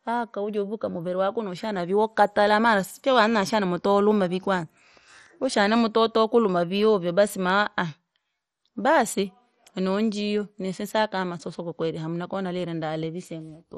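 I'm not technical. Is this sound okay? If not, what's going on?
No, the speech sounds dull and gurgly throughout, with nothing above about 13 kHz. That's likely heavy MP2 compression, which drops the highest sounds and roughens the rest.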